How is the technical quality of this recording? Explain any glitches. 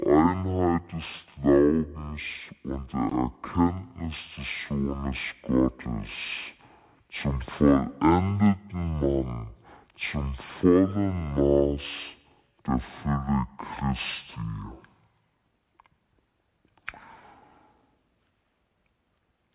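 The recording has one serious fault, running from start to finish: a wrong sample rate. The whole clip plays at half speed and an octave low, 12 semitones down, which fits audio captured at 16 kHz being played back at 8 kHz with no conversion. Halving the rate stretches every sample, so the speech drags slowly and sounds deep and heavy. What sets it apart from a pitch-shift fault is that speed and pitch fall together by the same factor of 0.5.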